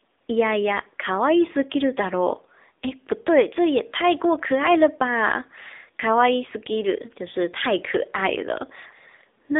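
Throughout, the speech has been squeezed through the AMR narrowband mobile codec, the AMR-NB speech coder that models the vocal tract and excites it with a handful of pulses per subframe. The damage is plainly audible, with a buzzy, synthetic edge that fits one of its lower modes around 7.95 kbps. The band is confined to roughly 250 Hz to 3.7 kHz, and nothing survives above 3.8 kHz, leaving the familiar thin, boxy phone-line sound.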